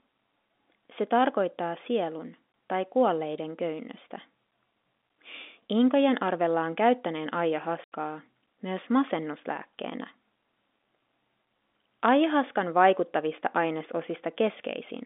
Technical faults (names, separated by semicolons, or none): packet loss filled with silence